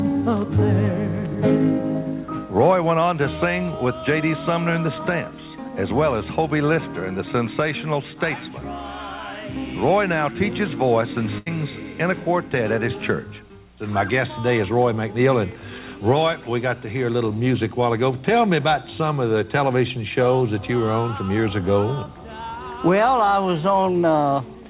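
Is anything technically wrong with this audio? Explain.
Yes, there is one fault. At 11.38 s to 11.48 s, a burst of packet loss takes out about 80 ms of audio. The receiver filled the gap by carrying the last sound forward and fading it, so a brief held buzz or thinning hiss replaces what was lost, and the sound then picks up slightly later with that stretch gone. On a waveform this looks like a short repetitive, decaying patch. On a spectrogram it shows as smeared, horizontally stretched bands that soften before normal detail returns. Across the clip, nothing sits above 4 kHz, which fits a G.711 mu-law call path at 64 kbps.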